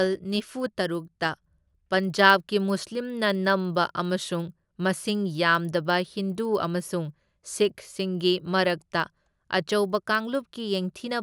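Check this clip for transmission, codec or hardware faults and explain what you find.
One fault runs through the whole clip: the resampler restarted on every block. The 24 kHz to 48 kHz conversion was done in separate 50 ms blocks. At each edge, the filter lacked the real neighbouring samples. That leaves a small error every 50 ms. It is heard as a steady 20 Hz ticking under the speech, present only while sound is playing.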